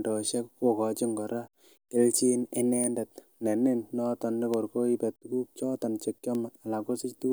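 Three bit error spikes land in this speech. The first is at 2.84 s, right after "kokochin kora kelchin", then 4.54 s just after "nenin noton", and the last at 6.35 s. Each is a single sharp tick peaking around -18 dBFS, broadband and unrelated to the speech. A flipped bit throws a sample's value off by a power of two before it snaps straight back. The 4.54 s tick comes from a run of three bad samples, the other two from a single sample each.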